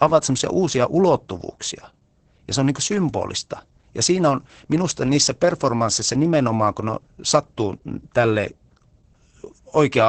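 Speech with heavy Opus voice compression throughout, muffled and hoarse as fits SILK coding near 10 kbps. A spectrogram shows nothing above 8.9 kHz.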